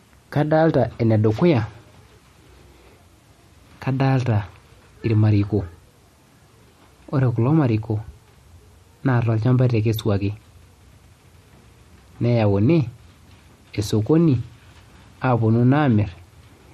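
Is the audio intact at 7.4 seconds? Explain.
No. At 7.4 seconds the speech carries the same damage heard across the whole clip: likely MP3 compression. Nothing reaches above 13.2 kHz, because the encoder cuts the treble at a fixed frequency. Weak spectral lines are zeroed and return unpredictably from frame to frame, so the sound turns watery and swirly, sibilants gain a metallic chirp, and onsets smear. The damage is plainly audible, which points to a low bitrate of around 45 kbps.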